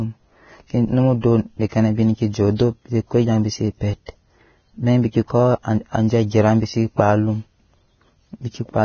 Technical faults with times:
0.00-8.85 Vorbis compression

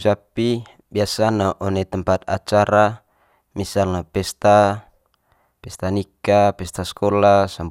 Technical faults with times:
none

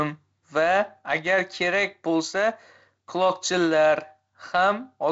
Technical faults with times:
none

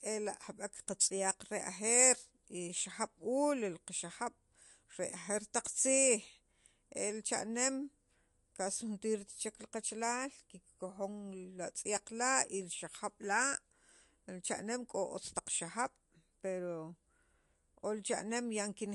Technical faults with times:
0.00-18.94 MP3 compression

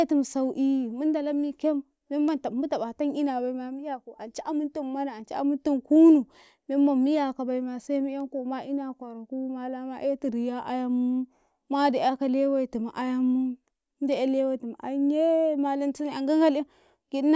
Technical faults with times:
none

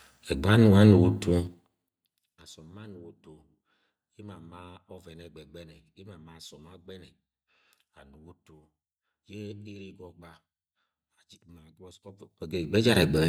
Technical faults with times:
1.37-1.96 zipper noise
12.03-12.97 zipper noise

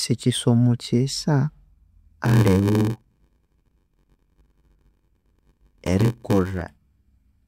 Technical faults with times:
2.24-6.62 block size mismatch (padded)

